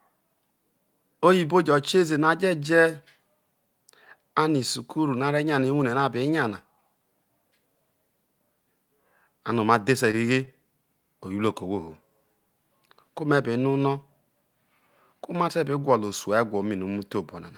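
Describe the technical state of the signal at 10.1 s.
At 10.1 s there's a short stall from a late packet, running from about 10.11 to 10.15 s. A packet didn't arrive on time, the jitter buffer ran dry, and the receiver stretched the last bit of speech to cover roughly 19 ms until the packet showed up. Nothing is actually lost; playback just picks up 19 ms later than before. You hear it as a sound hanging on a touch too long, with a faint buzz or dip.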